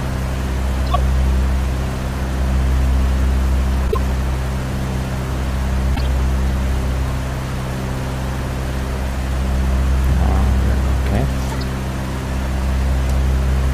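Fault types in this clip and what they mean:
Corrupt frame decoded: Damaged compressed frames were played back as if they were valid. Misread gains and codes push energy to the wrong frequencies. Each event is a brief chirpy burst of noise that does not belong to the sound. Bursts occur at 0.87 to 0.97 s, 3.83 to 3.96 s, 5.95 to 6.00 s, and 11.46 to 11.60 s. Each spans a handful of frames. The loudest reach about -5 dBFS.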